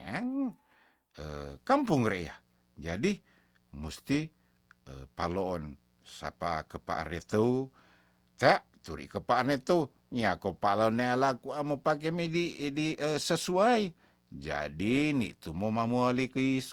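Generation loss runs throughout the speech, likely from re-encoding through Opus at around 64 kbit/s several times, so smeared, swirly, hollow textures and blurred attacks accumulate. Mains buzz starts at 1.23 s and continues to the end: a steady, raspy 60 Hz buzz with sharp harmonics, about 40 dB below the speech, from switching spikes leaking in.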